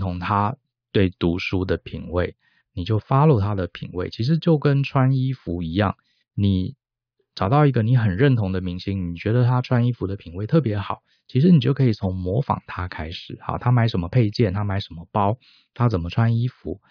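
Nothing in the recording of speech points to a technical fault at any point, and the signal holds steady throughout.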